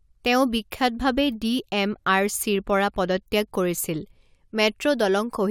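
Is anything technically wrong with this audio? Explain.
Yes. Periodic USB or driver dropouts run through the speech from about 0.05 s to 5.05 s, striking every 0.5 s, roughly ten times. A background task briefly stalls the audio path on a fixed schedule, and each time a sliver of audio, a small fraction of a millisecond, is skipped outright. The joins produce regular ticks heard only where there is signal. A waveform shows tiny step discontinuities; a spectrogram shows evenly spaced thin vertical broadband lines.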